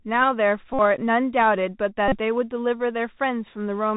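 From start to end the speech carries the Bluetooth CVSD headset codec. Everything above 4 kHz is gone, and a grainy hiss sits under the voice, which fits 64 kbps one-bit delta coding whose step size is always chasing the waveform. Sibilants come out scratchy and loud high-frequency moments smear where the step can't keep up. A plain low-pass filter would sound dull but clean, and this has that slope-overload roughness on top.

At 0.74 to 0.79 s and again at 2.08 to 2.18 s, a Bluetooth headset packet repeated fault breaks in. Lost voice packets were replaced by decoding the previous packet's bits over and over, about 52 ms of loss in the first event and about 38 ms in the second. Each 3.75 ms repeat stacks into a steady buzz near 267 Hz. A dropout would leave silence or a click, but here the gap is filled with that fixed mechanical tone until good packets return.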